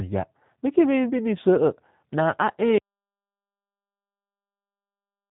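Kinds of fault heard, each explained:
G.729 codec: The speech has passed through a low-bitrate telephony codec. It rebuilds each short frame from a vocal tract filter, a pitch predictor and a few coded pulses, rather than from the original waveform. Here nothing above 3.9 kHz survives, so the sound is narrow and muffled. The roughness and synthetic edge are plainly audible throughout. This points to an 8 kbit/s coder such as G.729A.
Audio dropout to silence: At 2.78 s the sound stops abruptly in mid-flow. From there to the end of the clip there is complete silence. No room tone or background hiss remains, so this is not a quiet passage but an absence of signal. The cause is likely a lost input, with the recorder writing silence. Whatever followed that moment is gone.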